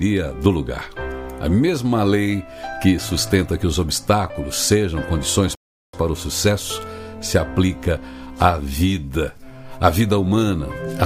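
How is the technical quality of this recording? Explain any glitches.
One glitch stands out: a rebuffering stall at 5.55 s. The playback ran out of downloaded audio and halted until more data arrived, so the sound drops to silence for about 0.38 s and then resumes exactly where it stopped, with nothing skipped. On a spectrogram this shows as a clean, empty vertical band from 5.55 to 5.94 s; on the waveform, a flat line between two unbroken stretches.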